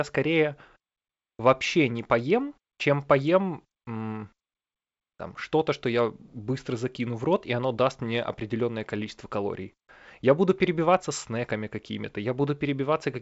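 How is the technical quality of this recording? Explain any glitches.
Nothing stood out on listening to this speech recording, which comes through G.722 wideband telephone coding at 64 kbit/s with its content ending around 7.7 kHz.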